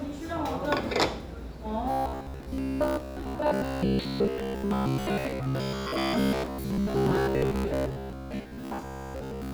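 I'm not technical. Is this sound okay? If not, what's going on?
No. From 1.91 s to the end at 9.54 s, there is robotic sound from repeated short buffers. New audio likely arrived too slowly, so the system kept replaying a tiny 15 ms slice, skipping most of the real sound. That forces a steady, metallic buzz near 67 Hz.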